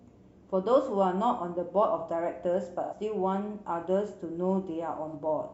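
Speech with AAC frame loss and concealment at 2.83 to 2.94 s (about 85 ms, fitting two lost frames) and 5.08 to 5.15 s (about 43 ms, one frame). The decoder patches each gap from the last good spectrum, so it sounds like a smeared, noisy or phasey patch rather than dropping to hard silence.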